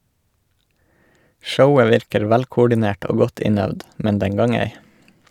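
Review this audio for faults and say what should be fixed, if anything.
Nothing here needs fixing, since I can't hear any technical faults anywhere in this bit of speech.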